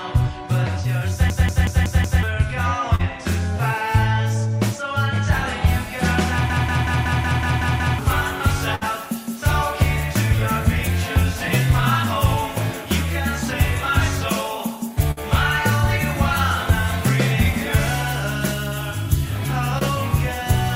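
From 1.3 to 2.23 s, and again from 6.50 to 7.99 s, a system hang loop repeats one 0.19 s piece of audio five and then eight times. The result is a machine-gun stutter at about 5.4 Hz, which fits an 8192-sample ring buffer cycling while the system froze. Around a second and then a second and a half of audio is lost. A waveform shows identical blocks tiled end to end.

At 2.95 s there is a short concealed packet loss: about 40 ms went missing, and the receiver filled the gap by extending the preceding sound. It comes across as a brief smear. The same thing happens at 19.79 s over about 20 ms. On a spectrogram, each appears as a short stretch of smoothed, repeated texture.

Bursts of packet loss at 8.75 s and 15.11 s each remove about 60 ms. Concealment holds the last sound, which fades as a buzz or hiss, and the audio then resumes further on. A spectrogram shows a decaying smeared patch followed by an abrupt change.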